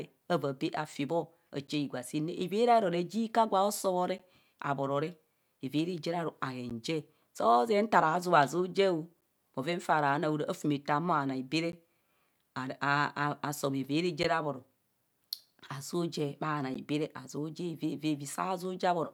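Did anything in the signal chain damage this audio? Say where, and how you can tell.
Yes: a gap between chunks where the audio was sent or stored in chunks. Crisp 12 ms holes cut the speech at 1.67, 4.18, 6.70 (after "re aru"), 9.21 (before "bhoven faa ra"), 11.72, 14.23 and 16.74 s, every 2.5 s, where silence was inserted between chunks.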